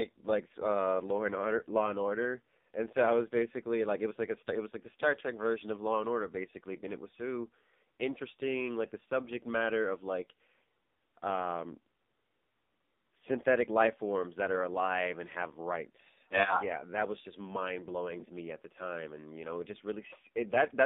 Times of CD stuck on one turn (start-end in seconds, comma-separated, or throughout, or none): none